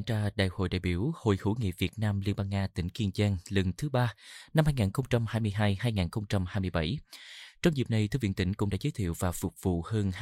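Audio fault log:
No faults are heard in this speech clip. Nothing in the audio needs a time or range in this log.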